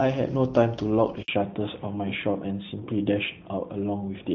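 A handover gap opens at 1.22 s and runs to 1.28 s, about 60 ms of silence. The call was being passed from one network link to another, and during that switch no speech frames got through, so the voice dies away within a few tens of milliseconds, and whatever was said in that short window is simply missing. The hole is brief, heard as a tiny dropout in the flow of speech.

Fallback to narrowband follows directly at 1.28 s and lasts to the end of the clip. Before this point the speech carries the fuller top end of wideband HD Voice, with light coding roughness consistent with AMR-WB at around 12.65 kbit/s. After the handover the call drops to an older narrowband codec, and nothing above 4 kHz survives. The speech turns duller and more muffled, with a rougher texture that fits AMR-NB at around 12.2 kbit/s.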